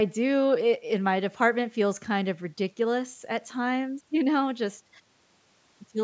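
No technical faults are audible.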